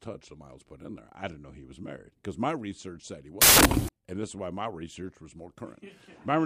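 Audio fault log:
3.42–3.89 s, samples built from the wrong bytes: loud, harsh broadband noise bursts in after "my research said he", as misassembled bytes push the fast-changing low bits into each sample's large part.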